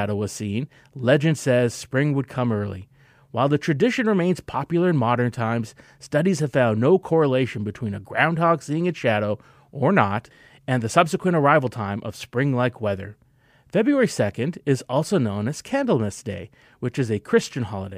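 No technical faults can be heard anywhere in the recording, so there are none to describe in time order.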